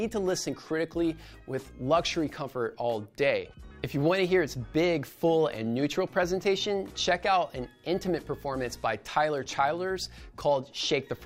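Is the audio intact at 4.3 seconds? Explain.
Yes, the audio is intact at 4.3 seconds, with no dropout, click, distortion or other fault at that moment.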